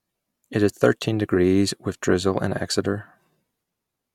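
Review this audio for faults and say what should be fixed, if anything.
Nothing in the speech calls for a fix, and no action is needed.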